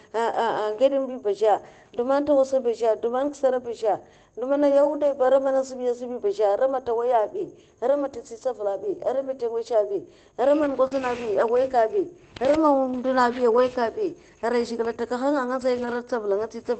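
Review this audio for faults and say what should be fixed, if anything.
There are six spots of lost packet rebuilt from error correction: 3.19–3.29 s, 4.83–4.85 s, 8.11 s, 10.91–10.93 s, 13.53–13.59 s and 15.77–15.87 s. In each, the next packet carried a low-bitrate backup copy of the missing audio, and the decoder played that copy, so there's no gap. The patched stretches are 20 ms at the single-packet spots, 40 ms at 13.5 s and 60 ms at 3.2 s and 15.8 s. Those patches sound grainier and noisier than the audio around them. The longer ones point to two or three separate packets going missing. To prevent it, cut the packet loss on the network path, or raise the FEC bitrate so the backup copies hold up better.

Around 10.87–10.94 s there's a short concealed packet loss, with about 40 ms of audio never arriving in time. The receiver covered roughly 35 ms of it by carrying the last sound forward and then blending back into the real signal, which gives a quick smear. 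That also stretches the timing by a few milliseconds. One of the FEC patches lands in the middle of it, so the whole moment comes across as a rough little blur. To prevent it, reduce the loss and the late arrivals, for example by giving the jitter buffer a bit more headroom. The Opus call path's normal band limit of about 8 kHz can be heard throughout.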